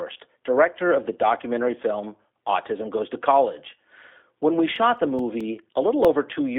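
The whole clip runs through a G.729 codec at what sounds like 8 kbit/s: nothing above 3.7 kHz, a narrow 250 Hz to 3.6 kHz line band, and plainly audible rough, synthetic speech. From 4.76 to 6.05 s you get CD scratch ticks, seven regular clicks of uneven strength where damaged disc data was patched over, the longest around 5 ms.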